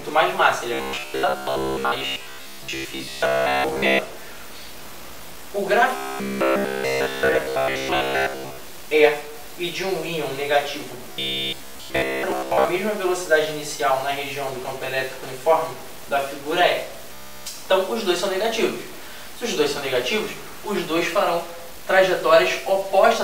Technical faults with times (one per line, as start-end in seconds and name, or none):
0.00-23.23 stuck bit
0.74-3.99 robotic sound from repeated short buffers
5.96-8.64 robotic sound from repeated short buffers
11.09-12.69 robotic sound from repeated short buffers
17.14-17.47 robotic sound from repeated short buffers